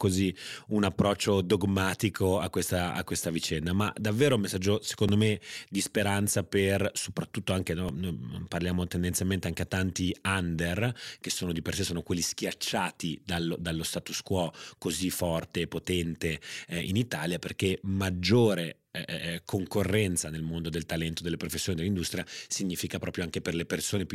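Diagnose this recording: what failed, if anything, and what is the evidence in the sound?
A repeated buffer at the driver or buffer stage: brief buzzy clicks at 5.08 s and 7.89 s, where a 1.45 ms slice, fitting a 64-sample buffer, replays three and then two extra times. Unlike a dropout, there's no silence, just a tiny looped fragment, with a few milliseconds of real audio lost.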